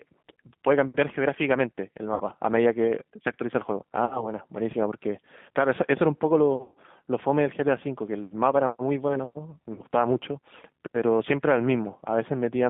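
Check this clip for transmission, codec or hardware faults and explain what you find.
Two faults are present: G.729 codec coding throughout the speech, and four short dropouts from VoIP packet loss concealed by the speech codec.

The G.729 codec runs for the whole clip at 8 kbit/s. It rebuilds speech from a vocal tract filter, a pitch predictor and sparse pulses, so the voice sounds rough and synthetic. The band is limited to roughly 150 Hz to 3.6 kHz. On a spectrogram, everything above 3.6 kHz is empty.

VoIP packet loss concealed by the speech codec occurs at 2.14–2.23 s, 4.05–4.32 s, 6.62–6.77 s and 9.73–9.82 s. About 60 ms of audio was lost in three of these events and about 150 ms in the one at 6.62 s. The decoder stretches its last pitch and filter and lowers the gain, so each gap is filled with a buzzy tone or coloured noise that fades. On a spectrogram, the harmonics smear flat across each gap. 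In the waveform, the envelope decays through the gap and recovers weakly afterwards.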